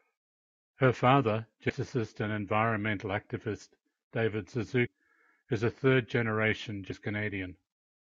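At 1.69 s, 4.85 s and 6.90 s the speech lurches forward. The loss grows each time: roughly 0.15 s first, then about 0.3 s, then about 0.4 s. These are compressed frames skipped. Whole frames of the coded audio never reach the output, so playback jumps ahead by a block that fits several frames at once.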